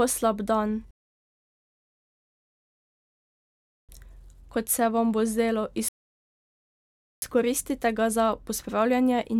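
At 0.91 s, just after "slab dan", the speech cuts to silence for about 3 s and resumes at 3.89 s exactly where it stopped; after "se vam bo zdelo" at 5.89 s, a second 1.3 s gap follows. Both are rebuffering stalls: the player exhausted its downloaded audio and waited, adding time without losing anything.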